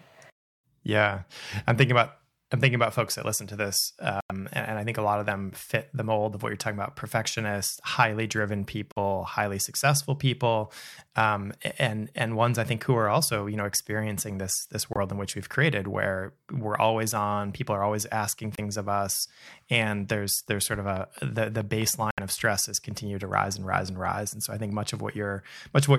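Speech with corrupt frames muted at 4.21–4.32, 8.92–8.98, 14.93–14.97, 18.56–18.60 and 22.11–22.19 s: the decoder rejected damaged frames, leaving abrupt silent gaps of 36 to 113 ms with timing intact. At 13.10 s a corrupt frame was decoded anyway, producing a brief artefact of misplaced energy at about −25 dBFS. From 20.97 to 21.83 s there is a train of clicks, about five evenly spaced pulses at 4.7 per second sitting slightly above the speech level, likely from electrical interference or a faulty connection.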